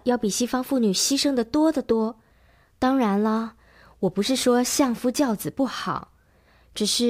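From 3.36 s to 5.89 s the speech shows crude rate conversion. Samples were simply dropped or repeated, without filtering, in a pattern that fits 48 kHz turned into 44.1 kHz. A gritty, inharmonic fizz rides on louder, brighter sounds, roughly 25 dB below the speech.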